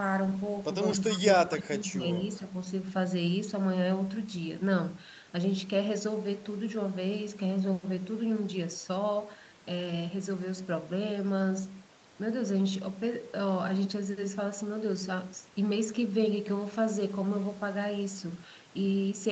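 At 1.16 to 1.2 s a faint delayed copy of the speech appears, trailing the original by 263 ms at about 25 dB below it. This is an echo leak, likely from a far end on a loudspeaker whose echo canceller left residue that was sent back. It recurs at 1.52 to 1.62 s, stronger at about 15 dB down, and again at 2.31 to 2.39 s, barely present at about 40 dB down.

Between 1.48 and 2.04 s the talker's own level drops in pieces, by around 20 dB at its deepest, over roughly half a second in total. This is speech suppressed in double talk. With both sides active at once, the echo canceller likely could not tell local speech from loudspeaker echo and attenuated both, so the voice dips and partly cuts out while the other side is talking, overlapping the strongest echo burst.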